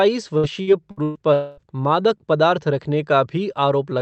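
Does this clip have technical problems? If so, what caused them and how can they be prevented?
Yes. From 0.37 to 1.18 s there is repeated packet loss (robotic sound): four separate holes, the longest 119 ms, are patched by stretching the preceding sound, so about 37% of that span is synthetic fill. It sounds choppy, with pieces missing. On a spectrogram the fills look like smeared, overly regular harmonic bands; the waveform shows repeated, looped-looking cycles between stretches of normal audio. Prevention: stabilise the network path and enable forward error correction or a larger jitter buffer.

From 1.33 to 1.60 s there is a single gap of roughly a quarter second, filled entirely by a continued tone that decays into a buzzy, fading tail before the audio resumes with that part missing. The likely cause is a long network dropout. On a waveform this appears as a smooth, shrinking envelope with no real detail. 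On a spectrogram it appears as flat, blurred bands fading out across the gap. Prevention: use a more reliable connection and redundancy so that brief outages are bridged.

Throughout the clip, the high end stops at 8 kHz, which fits Opus running at about 32 kbps on a call path.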